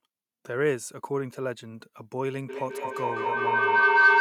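From 2.49 s to the end at 4.2 s, a shrill tone rises out of the speech, settling near 1.5 kHz until it peaks about 10 dB louder than the talker. This is feedback howl: a microphone is hearing a loudspeaker in the same room that plays it back, and each trip round that loop, about a fifth of a second, adds gain, so the repeats swell and narrow to one favoured frequency.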